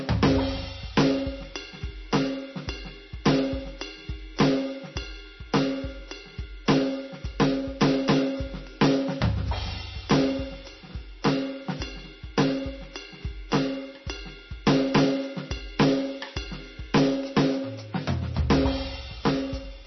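Throughout the music, the encoder has likely been starved of bits by heavy MP3 compression at a very low rate, around 26 kbps. It cuts everything above 5.9 kHz and drops weak frequency lines frame by frame, leaving a dull, watery, swirling sound with smeared attacks.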